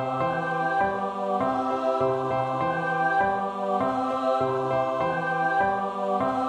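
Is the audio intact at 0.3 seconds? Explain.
Yes, at 0.3 seconds the audio is intact, with nothing audible there that breaks or degrades the signal.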